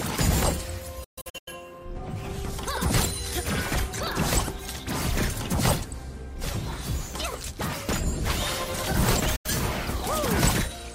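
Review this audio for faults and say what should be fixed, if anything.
Digital broadcast dropouts occur at 1.04 to 1.53 s and at 9.36 to 9.50 s. The first is a cluster of short holes over about 0.43 s, totalling about 0.3 s of silence. Its longest hole lasts 128 ms. The second loses about 85 ms in total. Each mute fades in about 8 ms. The receiver lost its signal or rejected corrupted frames, then muted until clean frames returned. The missing audio cannot be recovered. Stronger error protection or better reception would prevent it.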